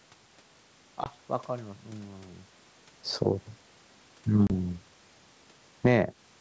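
A speech clip carried over a wideband call shows packet loss on an ADPCM call twice. At 1.04 to 1.11 s about 20 ms of audio is missing, and at 4.47 to 4.51 s about 30 ms, the size of roughly two and three lost packets. On a waveform these are flat, hard-edged gaps, and on a spectrogram they are blank vertical strips. Because the decoder's predictor and step size lose track of the sender's, speech comes back slightly distorted before settling. Near the end, automatic gain falling pulls the level down by about 7 dB between 5.70 and 6.02 s, and voice and background sink together as the waveform envelope tapers. Automatic gain rising then overlaps it from 5.93 to 6.36 s, lifting everything back by about 7 dB, so the envelope and the spectrogram's overall brightness swell again across the last fraction of a second.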